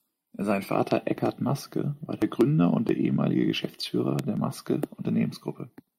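A speech recording carries two loud pops. The first sits at 0.91 to 0.93 s and peaks about 10 dB above the speech. The second, at 4.19 to 4.21 s, is stronger, at about 15 dB above. Each is a single sharp click. The speech runs on beneath both. The likely cause is a sudden voltage step, from a plug, switch, static discharge or driver glitch, entering the signal path.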